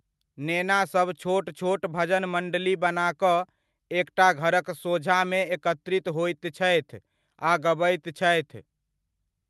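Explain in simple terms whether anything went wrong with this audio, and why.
Nothing went wrong with this recording, and no technical faults can be heard in it. The speech comes through steadily, with no gaps, jumps or interruptions along the way.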